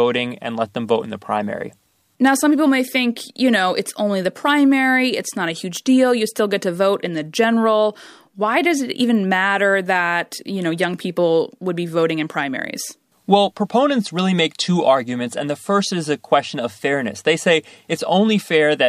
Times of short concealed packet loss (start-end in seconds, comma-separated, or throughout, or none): none